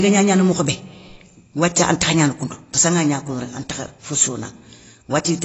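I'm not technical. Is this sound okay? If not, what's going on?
No. Throughout the whole clip, the speech sounds dull and smeared, with a warbling, fizzy edge on hissing sounds like s and sh. Nothing is heard above about 7.8 kHz, so the crisp top end is missing. This is likely AAC compression: the encoder squeezed the file to a small size by discarding detail it judged less audible, and at this setting it cut too deep, leaving plainly audible damage.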